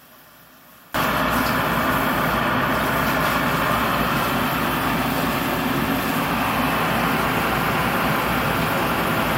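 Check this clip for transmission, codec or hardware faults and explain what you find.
One fault is present, at the very start. From 0.0 to 0.94 s the sound is much weaker, down by about 26 dB. Whatever sits in the centre all but disappears. The likely cause is one channel inverted. If one side of a stereo pair has reversed polarity, the shared content cancels when the two are summed to mono. Only the small difference between the channels survives. That leaves this faint trace.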